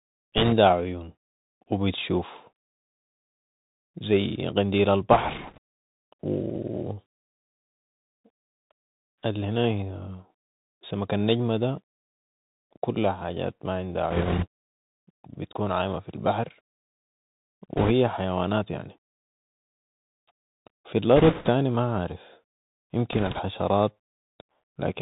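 Throughout the speech the Bluetooth CVSD headset codec is plainly audible. The encoder sends one up-or-down bit per sample and adapts its step size, which fits a 64 kbps headset link. Nothing survives above 4 kHz, s sounds turn scratchy, and a fine granular hiss sits under everything. Unlike ordinary low-pass telephone filtering, the damage is mostly slope overload and step noise: loud, bright passages smear because the step cannot climb fast enough.

Bit errors on a Bluetooth voice link then break in six times: 0.38 to 0.53 s, just before "عيون وبتشوف"; 5.12 to 5.58 s; 14.10 to 14.46 s, right after "كلها حاجات ما عندا"; 17.77 to 17.92 s, just before "حيوانات يعني"; 21.16 to 21.49 s; and 23.13 to 23.40 s. Each sounds like a short burst of rushing, crackly noise laid over the speech. The bursts at 14.1, 17.8 and 21.2 s are coarser, which fits an error rate of several percent, against a few percent elsewhere. 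In CVSD every bit carries the same small weight and a wrong step fades away, so these bursts bring no sharp clicks or dropouts. That sets them apart from packet loss or bit errors in a frame-based codec.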